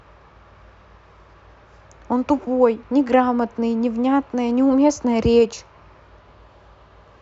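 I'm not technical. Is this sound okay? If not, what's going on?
Yes, the recording has no technical problems: nothing in the signal is broken, cut off or distorted, so there is nothing to fix.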